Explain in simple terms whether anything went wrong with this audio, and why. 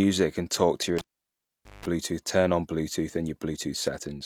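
Right after "and talk to your", at 0.99 s, there's a pop, then almost nothing for about 0.8 s, then a low 50 Hz hum and another pop at 1.86 s. That's a cable pulled and plugged in: the lead came out, then buzzed briefly while half-inserted.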